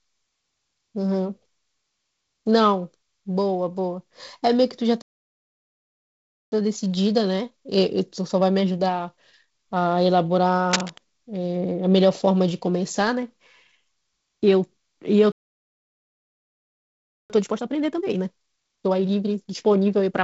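At 5.02 s the speech just cuts out and stays silent until 6.52 s, a playback stall of about 1.5 s, most likely the player running dry or its thread getting blocked. From 6.52 to 9.52 s you get time-compressed catch-up: the player trims its backlog by splicing out small slices, so the speech runs about 1.1 times fast at normal pitch.

At 10.71 to 10.98 s there's a short rasp of cable scratch noise, dense and uneven, sitting only slightly below the speech. It sounds like a worn connector or lead being moved, likely shifting contact resistance.

A second, longer stall starts at 15.32 s and holds silence for about 2 s, to 17.30 s. Catch-up then kicks in much harder, at 1.5 times speed right to the end, so the speech sounds clearly rushed, still at normal pitch. Underneath it all, the G.722 wideband telephone coding is working as it should. It tops out at about 7 kHz and has the light, slightly noisy character you'd expect at its lowest rate.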